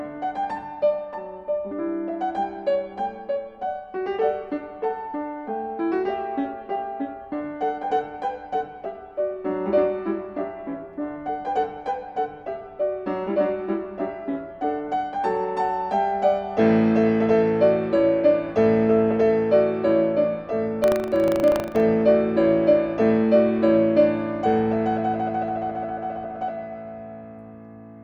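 From 20.8 to 21.82 s a robotic 25 Hz rattle appears: buffer tearing, where writer and hardware pointers cross each period, splicing in a tiny sliver of audio roughly 70 ms old.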